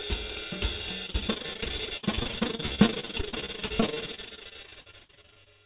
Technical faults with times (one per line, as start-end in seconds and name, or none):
1.06-5.48 repeated packet loss (robotic sound)